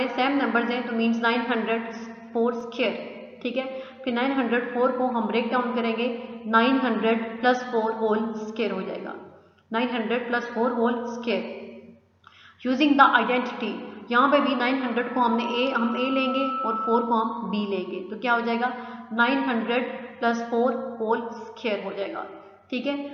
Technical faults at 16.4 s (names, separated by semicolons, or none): loudspeaker feedback squeal